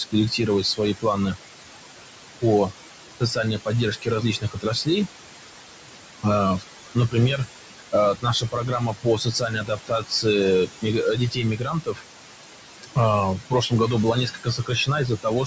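Noise suppressor artifacts run through the whole speech recording: the suppressor pulls steady room noise, sitting about 8 dB under the voice, down by about 21 dB between words. Speech cut by the noise suppressor occurs at 0.0–1.37 s, 3.2–5.08 s, 6.95–10.26 s, 10.66–12.04 s, 12.83–12.97 s and 13.38–15.47 s. Quieter consonants and word endings there were treated as noise and dropped by about 20 to 22 dB, so they sound swallowed. The call microphone path carries nothing above about 8 kHz, which is normal.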